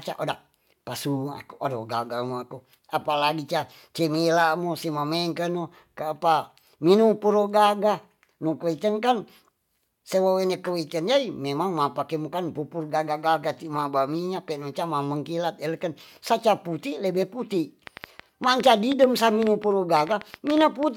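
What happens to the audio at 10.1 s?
Nothing goes wrong at 10.1 s; the speech runs through that moment intact, with no dropout, click or distortion.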